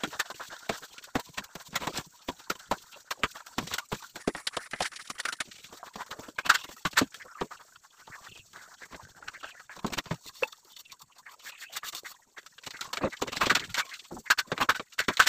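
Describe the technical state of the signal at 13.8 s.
At 13.8 s the signal is intact, with no audible fault at that moment.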